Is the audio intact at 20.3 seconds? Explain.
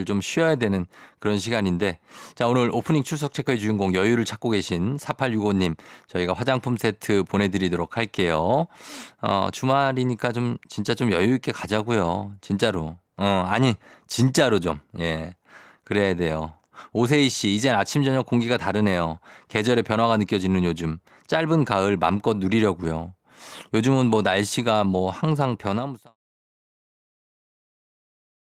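Yes, the speech at 20.3 seconds is intact, with no fault at that moment.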